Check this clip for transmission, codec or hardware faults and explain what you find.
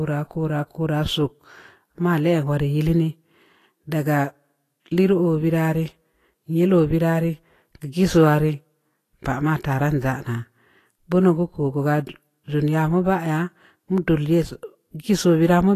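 One codec fault runs through the whole speech clip. It is most likely Vorbis compression. Nothing is present above about 14.2 kHz. The treble is coarsely quantised, so fine detail turns to noise of similar energy. It sounds hissy and grainy. Attacks blur. The damage is plainly audible and fits a low bitrate near 33 kbps.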